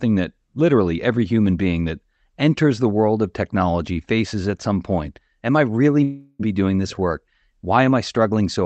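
It's a speech clip, and at 6.03 s the audio cuts out until about 6.41 s in what sounds like a long network dropout. For nearly 0.36 s the receiver smears the last sound into a fading buzz before a brief silence, then speech resumes with that stretch simply gone. The top end stops around 8 kHz, which fits the Opus call codec it passed through.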